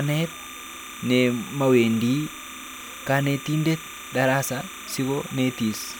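All the way through the speech there's timecode bleed, a chirpy warble around 1 and 2 kHz sitting roughly 15 dB under, leaking from 29.97 fps linear timecode.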